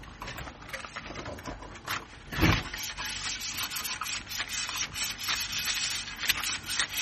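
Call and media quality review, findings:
Likely MP3 compression at a starved bitrate, which fits roughly 32 kbps, throughout the clip. Encoder lowpass removes all content above 15.2 kHz. Weak spectral lines are zeroed and toggle frame to frame, giving plainly audible watery, swirling texture. Metallic chirps on bright, noisy content. Transient attacks smeared by the long transform blocks.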